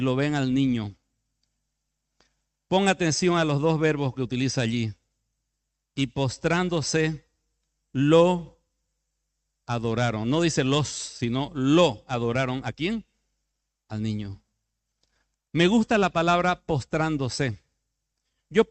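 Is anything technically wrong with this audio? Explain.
No, nothing is technically wrong with this audio.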